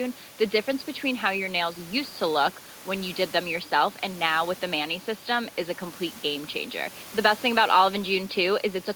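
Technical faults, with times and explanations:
No technical faults occur in this clip, so there are no times or explanations to give.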